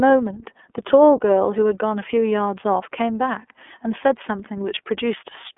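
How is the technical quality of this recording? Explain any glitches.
Technical quality is limited by a single fault present for the whole clip. From start to finish the speech carries the iLBC codec. Sound is confined to roughly 300 Hz to 3.4 kHz, so it is thin and muffled. Each frame's excitation is coded independently, which fits 30 ms frames at about 13.33 kbps, leaving plainly audible roughness and a synthetic edge.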